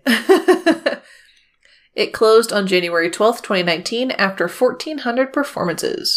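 No technical faults can be heard anywhere in this speech recording.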